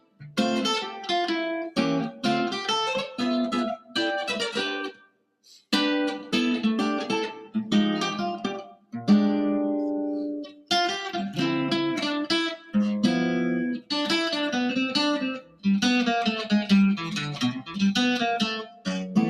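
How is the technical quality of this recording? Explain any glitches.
The recording is compromised by a speech-oriented noise suppressor that was left running on non-speech material, plus repeated moments where it bites down hard.

Across the whole clip the noise suppressor, applied to music or sounds it was never tuned for, keeps reclassifying sustained content and ambience as noise. The level swings by a few decibels as it decides and re-decides, giving a pumping, thinning texture. Unlike compressor pumping, the swings don't follow loudness. They follow how steady the sound is: held and decaying material sinks while onsets pass.

Sound cut by the noise suppressor occurs at 0.0–0.22 s, 3.78–3.95 s, 4.92–5.46 s, 8.74–8.94 s, 10.49–10.7 s, 12.57–12.74 s, 15.41–15.65 s and 18.64–18.87 s. Each is a brief hole, mostly around a fifth of a second, with the 4.92 s one about half a second. The drops are about 18, 13, 19, 18, 13, 9, 17 and 14 dB respectively. 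Here the suppressor judged a stretch of sound to be noise and pulled it down. This differs from a packet dropout because the sound dims rather than vanishing abruptly to silence.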